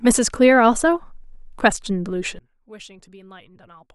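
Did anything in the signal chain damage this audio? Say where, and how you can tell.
Yes. From 2.39 s to the end, the speech falls by about 24 dB and turns faint, which points to one channel inverted, likely a polarity-reversed wire, cancelling the shared centre in mono. A plain gain drop would keep the timbre; this keeps only the faint channel difference.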